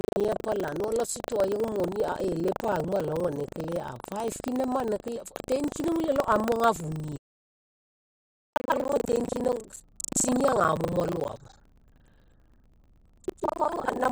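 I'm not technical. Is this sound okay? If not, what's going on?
No. Two things are wrong with this speech recording.

The first is buffer tearing, and it runs through the whole clip. The voice has a robotic buzz or rattle, repeating 25 times a second. The recording system and the sound hardware fell out of step. So each short chunk of audio, about 40 ms long, is mostly filled with stale sound. Roughly two thirds of it comes from a moment earlier. The buzz appears only while someone is talking.

The second is an audio dropout to silence. From 7.01 to 8.54 seconds, the sound stops completely. For about 1.5 seconds there is no room noise at all, just dead silence. Then the voice returns mid-flow. Whatever was said in that gap is gone. The likely cause is that the microphone or its connection briefly cut out while recording carried on.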